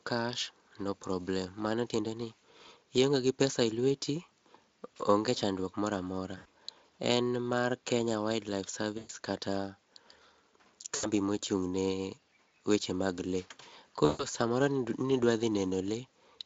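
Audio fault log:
6.37–6.46 s, 8.97–9.11 s, 10.95–11.07 s, 14.05–14.26 s: VoIP packet loss concealed by the speech codec. After "onge chandruok moramora" and at each later gap, the Speex decoder extends the last pitch and filter into a buzzy tone or coloured noise that fades, lasting 80 to 140 ms. The speech stays weak briefly afterwards as the decoder state recovers.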